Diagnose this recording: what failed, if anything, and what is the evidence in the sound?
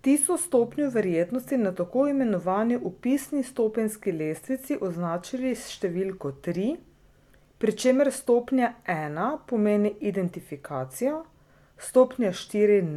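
Nothing failed here: the speech comes through with no dropouts, clicks, distortion or other breaks, so there's nothing to pin to a stage.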